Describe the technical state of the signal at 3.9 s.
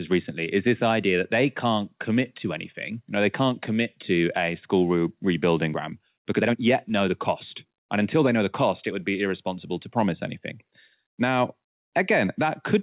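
At 3.9 s the speech is intact, with no dropout, glitch or distortion, only the narrowband sound of the WebRTC call path, which leaves nothing above 4 kHz and fits a G.711 mu-law codec at 64 kbps.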